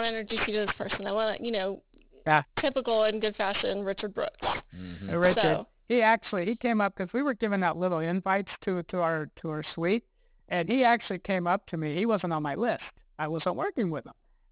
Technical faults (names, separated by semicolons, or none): aliasing